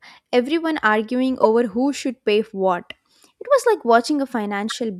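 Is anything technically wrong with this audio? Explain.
Yes. Two corrupt frame decoded faults occur. The first runs from 1.43 to 1.46 s, between "everyone arguing" and "who should pay for". The second runs from 4.70 to 4.73 s. Each covers roughly two frames. Damaged bits were decoded as valid data, scattering energy to the wrong frequencies. The first has an error peak around 0 dBFS. The second is softer, around -15 dBFS.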